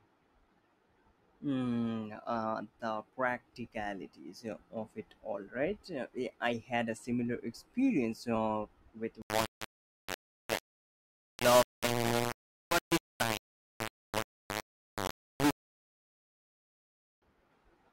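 From 9.22 to 17.22 s the speech was likely rounded to only 3 bits without dither, so a gritty distortion, nearly as loud as the voice, tracks every syllable.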